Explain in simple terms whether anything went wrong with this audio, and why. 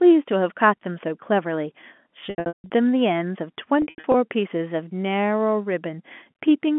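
Yes, something went wrong: packet loss with pitch repetition, in two bursts. From 2.26 to 2.7 s, about 0.36 s of sound is missing in scattered pieces, the longest gap 0.16 s. From 3.82 to 4.14 s, about 0.2 s is missing, the longest gap 0.08 s. The receiver fills each hole by repeating the last bit of voice and fading it out, so short gaps sound briefly held and buzzy, and the longest ones drop toward silence. The telephone-quality coding itself sounds as it should.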